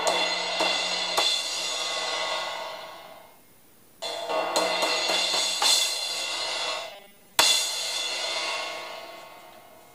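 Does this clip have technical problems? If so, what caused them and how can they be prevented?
Yes. From 6.92 to 7.33 s the sound turns into a rigid metallic buzz at 200 Hz: robotic sound from repeated short buffers. Audio likely arrived too slowly, so a 5 ms chunk was replayed over most of the real signal. Larger input buffering prevents this.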